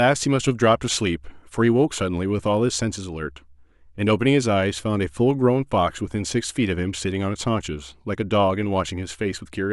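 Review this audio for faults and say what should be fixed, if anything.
No faults heard; nothing needs fixing.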